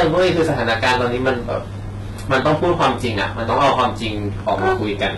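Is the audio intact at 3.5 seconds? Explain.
No. Hard clipping is present at 3.5 s and throughout the clip. The speech is driven about 13 dB beyond what the signal path can carry, so the loudest peaks are sliced flat. About 7 percent of samples hit that ceiling. Those squared-off tops add harmonics high in the spectrum, heard as a harsh, crackling fuzz on stressed syllables and louder passages.

The clip also has heavy codec damage that points to HE-AAC compression, likely at a very low rate around 16 kbps. Nothing is present above 11.8 kHz, and the treble that remains sounds synthesized. It appears to be copied up from the lower bands and shaped only roughly, so its harmonics do not line up with those below. Sibilants come out gritty, metallic and lispy, and this affects the whole clip, including 3.5 s.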